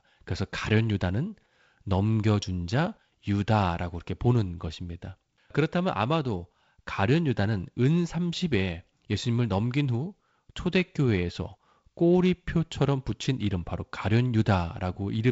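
No technical faults are audible.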